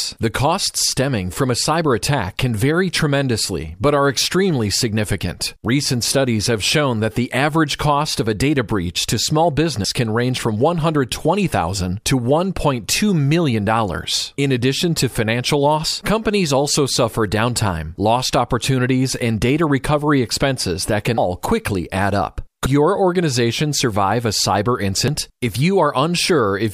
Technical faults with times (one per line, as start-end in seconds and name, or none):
9.85 dropped buffer (overrun)
15.88 dropped buffer (overrun)
21.18 dropped buffer (overrun)
22.66 dropped buffer (overrun)
25.08 dropped buffer (overrun)